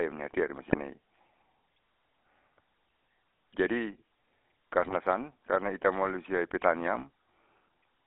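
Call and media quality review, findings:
GSM full-rate codec, whole clip. Buzzy, gravelly speech, band limited to roughly 250 Hz to 3.6 kHz. Coarse pulse excitation and subsampled residual, which fits the 13 kbps full-rate codec. Codec damage plainly audible throughout.

GSM bit errors, 0.70–0.81 s and 4.82–4.93 s. Short squawking, gargled bursts. Corrupted filter, pitch or gain parameters reaching the decoder. Each burst is about 0.1 s long, which fits roughly five damaged frames on a weak radio link.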